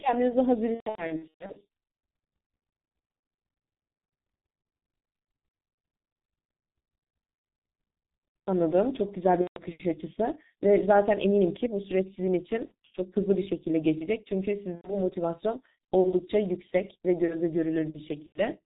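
The whole clip carries G.723.1 codec damage, and it is heavy. The speech sounds muffled and hoarse. Nothing comes through above 4 kHz. Consonants smear together. The dullness points to a low-rate telephony codec near 6.3 kbit/s. Its voice model updates slowly, in 30 ms steps, so fast changes in the speech blur.

VoIP packet loss concealed by the speech codec first appears from 0.74 to 1.61 s. The dropouts are scattered across about 0.81 s and add up to roughly 480 ms, with the longest single gap at 120 ms. During each gap the decoder repeats its last pitch and filter and lowers the level step by step. The speech is stretched into a sound that fades. It stays weak or distorted for a moment after the stream returns. Shorter losses follow at 9.42 to 9.61 s (150 ms), 12.65 to 12.74 s (60 ms), 14.75 to 14.99 s (90 ms) and 18.27 to 18.41 s (90 ms). Each one briefly fades the same way.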